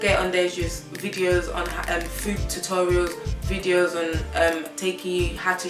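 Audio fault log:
Nothing to log here, just the sound running along with no trouble anywhere.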